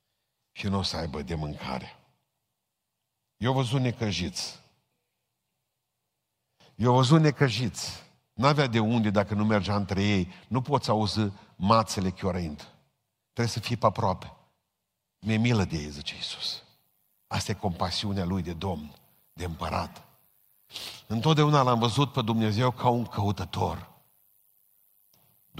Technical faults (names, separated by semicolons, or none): none